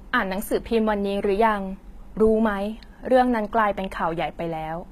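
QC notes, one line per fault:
Throughout: HE-AAC compression, likely. The speech has plainly audible codec damage. Nothing is present above 14.9 kHz, and the treble that remains below that cut-off sounds synthetic. Sibilants come out gritty and metallic, because the upper band is rebuilt by copying lower bands upward under a coarse envelope instead of being coded directly. Harmonics therefore fail to line up across the crossover. The damage is consistent with a low bitrate of around 20 kbps.
2.27–2.42 s: phantom power thump. A deep, low-frequency thump cuts into the speech and dies away quickly, with a decay of about 35 ms. This sound comes from a supply being switched on a live input. The sudden DC step passes through the coupling capacitors and reaches the signal as a single pulse. The short decay points to a fairly small coupling time constant.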